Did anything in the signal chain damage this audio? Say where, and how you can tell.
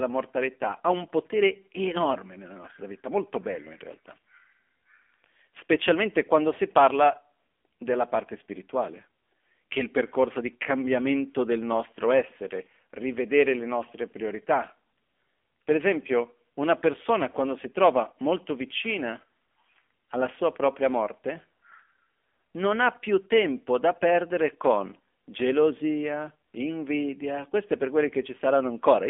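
Yes, at the codec stage: this is the AMR narrowband mobile codec, and it runs the whole clip. Nothing gets through above about 3.5 kHz, and the low end thins out below 250 Hz, so the speech sits in that classic phone band. The voice has a clearly buzzy, synthetic edge. That fits a low-rate mode around 7.4 kbps, where the vocal-tract model gets too few pulses per subframe to rebuild the speech cleanly.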